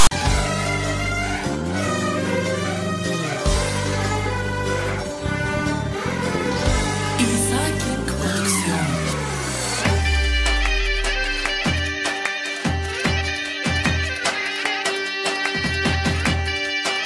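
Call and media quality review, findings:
File tags played as audio, 0.00–0.11 s. Decoder or player treated a metadata block as samples: text bytes give a harsh, lopsided rasp, zero padding gives dead silence. Symptom: abrupt hard-edged static burst at clip start.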